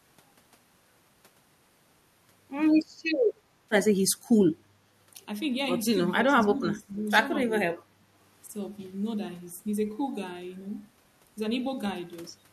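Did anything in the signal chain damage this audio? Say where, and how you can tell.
Yes, at the call-processing stage, where the speech is suppressed in double talk, likely because the echo canceller mistook this side's speech, overlapping the far end, for echo and attenuated it. The speech dips by roughly 15 dB from 6.12 to 6.97 s, shows a slight dip at 7.48–7.52 s, then drops by about 25 dB from 7.69 to 8.06 s. Those level losses, recovering once the overlap ends, are what give it away.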